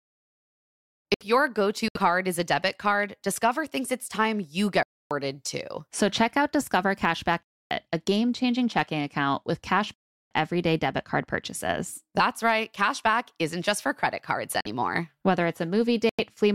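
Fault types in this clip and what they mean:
Block of digital silence: Stretches of the speech drop straight to silence and return with no fade. Here the holes run 1.14 to 1.21 s (67 ms, just before "your go"), 4.83 to 5.11 s (279 ms, after "thinks it's time you"), 7.43 to 7.71 s (279 ms) and 9.94 to 10.31 s (372 ms, between "checking account with cash" and "everyday debit card purchases"). The 372 ms gap fits a 16384-sample buffer that was not filled in time.
Corrupt frame muted: Damaged compressed frames were rejected by the decoder and replaced with silence. Each hole starts abruptly, and the speech resumes on schedule with no shift in timing. The dropouts fall at 1.88 to 1.97 s, 14.61 to 14.67 s and 16.09 to 16.21 s, lasting about 89, 60 and 112 ms. Those lengths point to runs of roughly three, two and four consecutive frames, each around 30 ms, being discarded.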